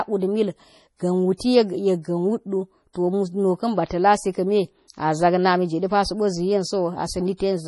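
From the very start the speech has a watery, swirly quality with nothing above about 11.4 kHz. That's heavy MP3 compression, likely from an encoder starved of bits, and it fits a bitrate around 32 kbps. The encoder has chopped off the treble at a fixed point and is dropping quieter frequency detail, which flickers in and out from frame to frame. That gives the swirl, and s sounds come out metallic.

Pre-echo shows up twice. The first is from 2.93 to 2.95 s, a hiss of about 21 ms just ahead of a sharp attack. The second is from 4.88 to 4.90 s, right after "ba ta̱ lasi kame", and lasts about 24 ms. Both times a sudden onset landed late in a coding block. The noise the codec budgeted for the loud part spread back into the quiet moment before it, so you hear a short smear of hiss and the attack loses its crispness.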